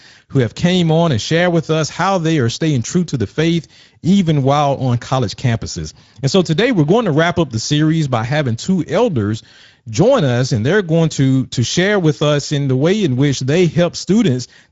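Speech, and it's carrying Speex codec damage from start to finish that you can plainly hear. It has the hoarse, grainy quality of a CELP coder that doesn't have enough bits to model the excitation properly, which fits a bitrate of roughly 17 kbps. There's also nothing above about 7.7 kHz, so the top end stops abruptly at the edge of the codec's wideband range, just like old VoIP or game chat.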